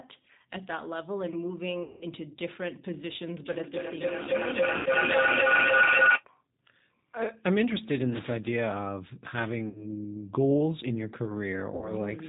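Speech, carried through a G.729 codec at 8 kbit/s for the whole clip. The damage is plainly audible. Nothing above 4 kHz survives, so the sound is dull and boxy. The codec rebuilds each 10 ms frame from a vocal tract model, a pitch predictor and a few pulses. That leaves the speech rough and slightly synthetic. From 3.46 to 6.26 s there is feedback howl. Two devices in the same room are on the call. Sound from one loudspeaker re-enters the other microphone and comes back louder on each trip. The repeats narrow onto a tone around 1.5 kHz. The loop's round-trip delay is roughly 0.3 s. At its peak it sits about 10 dB above the speech. It stops only when the loop is broken. Four dropouts show VoIP packet loss concealed by the speech codec. They fall at 1.83 to 2.05 s, 4.77 to 4.89 s, 9.69 to 9.86 s and 11.76 to 11.91 s. The lost audio runs 180 ms, 90 ms, 60 ms and 60 ms. The second lands inside the howl. 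In each gap the decoder repeats its last pitch and filter with falling gain. The sound smears into a fading buzz or coloured noise. Each frame builds on the one before. So the speech stays weak or distorted briefly after the packets resume.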